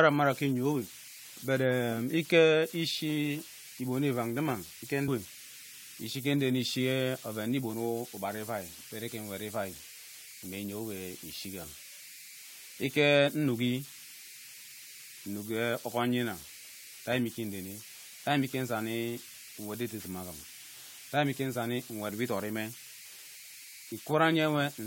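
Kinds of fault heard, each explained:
Converter idle tones: an undithered delta-sigma converter cycles through repeating bit patterns, leaving a whistle around 2 kHz, about 19 dB below the speech.
Overlap between stream segments: overlapping segment timestamps caused a few milliseconds to be trimmed, so the waveform jumps in a tiny skip at 15.04 s.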